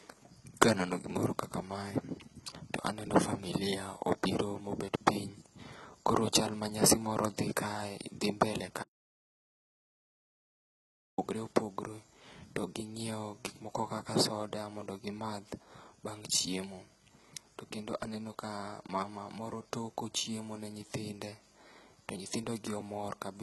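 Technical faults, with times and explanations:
Throughout, HE-AAC compression: the speech treble sounds synthetic, with gritty, lispy s sounds. This is likely a low-bitrate codec rebuilding the top band from copied lower bands, pointing to about 16 kbps. Unlike plain low-pass loss, the highs are present but wrong.
8.83 to 11.18 s, audio dropout to silence: after "dhi kae dhi mbele" the sound stops dead for about 2.35 s, then resumes mid-flow at "opogore to". The gap is silent with no room tone, which points to a likely lost input, not a quiet pause.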